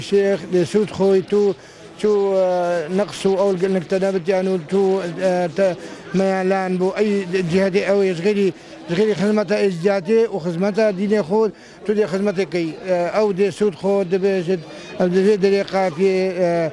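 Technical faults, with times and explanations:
No technical faults detected.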